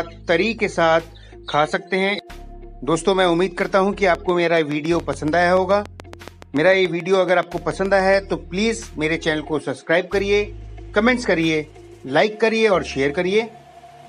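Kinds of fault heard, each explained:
Train of clicks: Same-shaped pulses tick regularly at 7 per second from 4.15 to 8.15 s. About thirty clicks peak about 5 dB above the sound. Likely outside interference.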